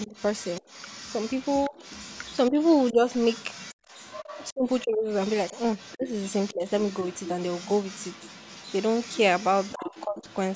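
From the start of the clip to its end, a faint second voice runs under the main talker, sitting roughly 20 dB below the speech. This is most likely the other side's voice leaking through: the far end was playing on the talker's loudspeaker, and the echo canceller left a residue of it in the microphone signal.

Within the first 0.64 s, between 0.07 s and 0.64 s, the talker's level sinks by something like 15 dB for a tenth of a second or so, in short pieces. This is speech suppressed in double talk. The same thing happens as a brief dip at 1.70 to 1.74 s, and as a milder drop of around 10 dB scattered over 2.50 to 3.03 s. These are likely points where both sides spoke at once, and the canceller, unable to tell the near voice from the echo, turned everything down together.

From 3.74 to 3.88 s the room sound itself falls away by about 30 dB for roughly 150 ms, then returns. This is background gated by the echo canceller. 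The canceller clamped the microphone while the loudspeaker was active, so the ambience briefly drops to near silence rather than fading.

The double-talk suppression returns harder later. From 4.52 to 5.09 s the speech loses around 25 dB across a good part of that span, so syllables thin out or cut in and out. From 5.95 to 6.65 s and again from 9.74 to 10.25 s, drops of around 20 dB chop the voice in the same broken way, the last one covering much of that half-second.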